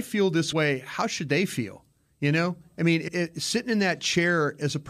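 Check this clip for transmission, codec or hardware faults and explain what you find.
Compressed frames skipped occur twice in this speech. At 0.51 s the sound jumps ahead by about 50 ms, consistent with two 23.2 ms frames dropped. At 3.07–3.09 s it skips about 100 ms, roughly four frames.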